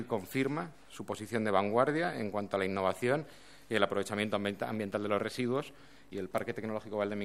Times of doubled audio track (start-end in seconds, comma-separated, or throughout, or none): none